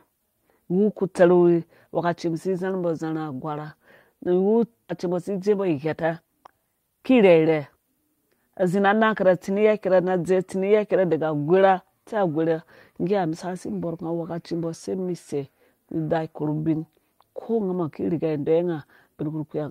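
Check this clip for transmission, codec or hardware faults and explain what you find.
Two transmission faults are present.

At 4.9 s there is a skip ahead: about a second of audio was dropped, so the speech jumps forward abruptly with no gap or fill.

From 5.03 to 7.29 s there is a jitter buffer speed-up: the buffer trimmed short pitch-period pieces to shed excess delay, so speech runs at 110% speed at unchanged pitch and sounds hurried.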